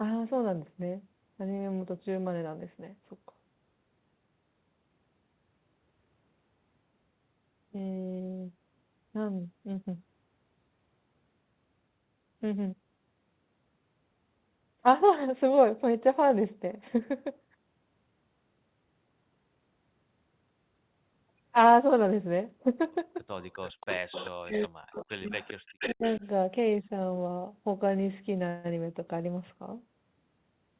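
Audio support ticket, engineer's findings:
Echo leak: delayed copy of the speech trailing the original by 0.39 s, about 15 dB down, at 23.41–24.30, 24.52–24.68, 24.92–25.10 (about 25 dB down) and 25.28–26.27 s. Likely residual from a loudspeaker-side echo canceller. A fixed lag and distinct repeats rule out room reverb.

Speech suppressed in double talk: near talker dips as much as about 40 dB during overlap, 24.38–25.30 and 25.92–26.24 s. Likely the canceller's suppressor clamping both sides. Dips track the far-end echo, unlike random packet-loss gaps.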